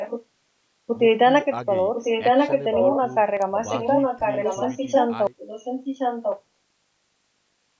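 From 0 to 0.25 s a delayed copy of the speech, around 10 dB down, trails in. This is an echo leak, likely from a far-end loudspeaker the echo canceller failed to suppress. The same copy, 1.05 s late and as loud as the direct speech, returns from 1.94 to 2.99 s and from 3.57 to 5.08 s. On a spectrogram it appears as a shifted duplicate of the harmonic pattern.

At 3.42 s a sharp snap, likely an electrical switching spike from a nearby switch or discharge, shows as a thin vertical line in the waveform.

At 5.27 s the sound abruptly drops to hiss about 45 dB down and stays there to the end. This is an audio dropout to a faint residue, the signal likely lost while the line stayed live. The spectrogram shows a hard edge into a faint, even noise floor. Inside that gap, from 5.38 to 6.42 s, another echo leak about 5 dB below speech level can be heard. Nothing reaches above 8 kHz.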